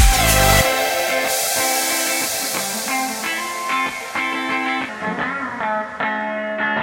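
A music clip whose last stretch, from 4.89 s to the end at 6.82 s, suddenly drags and sinks, slowing to about 0.82 times its pace and dropping roughly three semitones in pitch: a section at the wrong speed, likely from playback or editing against a mismatched clock.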